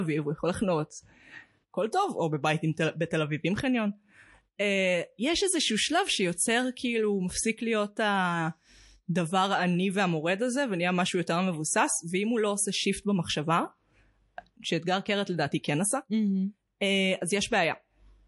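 Speech runs through the whole clip with plainly audible MP3 compression: the top end is dull and s sounds go watery and swirly as weak frequency lines flicker between frames, likely from an encoder starved of bits, which fits a low bitrate around 48 kbps.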